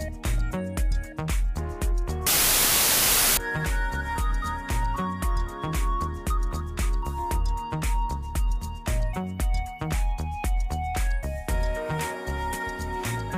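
From 2.27 to 3.37 s, a wrong sample width fault hits. The sound suggests 32-bit samples read back as packed 24-bit. Bytes from neighbouring samples get mixed, so loud noise buries the original. What survives plays at 0.75 times speed, lower in pitch.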